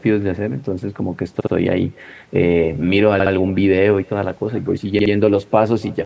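Throughout the clip the speech carries an echo with no canceller. A faint, thin copy of every phrase returns around a third of a second after the original, sitting about 28 dB below the direct speech. This is the sound of the far end playing the call through a loudspeaker and its microphone feeding it back across the network with no echo cancellation. It is quiet but constant, a soft shadow trailing each phrase.

At 1.41 s, 3.20 s and 4.99 s there is a repeated buffer. Each time a 64 ms slice of audio is played two extra times, giving a stutter of about 0.13 s with a hard join at each repeat. The slice length fits a 1024-sample buffer. New audio arrived late, so the playback device looped the last block it had. The three events are evenly spaced, each a brief mechanical judder in the flow of speech. The call-style microphone processing is also audible, with no content above 8 kHz.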